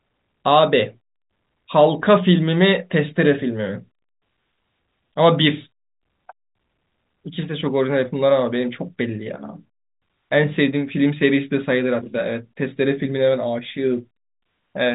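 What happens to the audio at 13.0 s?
Nothing goes wrong at 13.0 s: the speech carries on intact through that moment, with only the narrow telephone band of the G.711 coding, which passes nothing above about 3.8 kHz.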